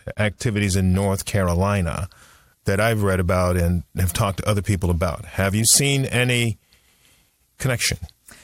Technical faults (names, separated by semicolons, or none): pre-emphasis left on